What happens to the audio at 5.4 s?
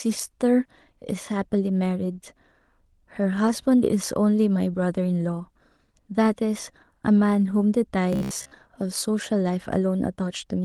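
Nothing goes wrong at 5.4 s: the speech carries on intact through the call path, with no dropout, glitch or other fault at that moment.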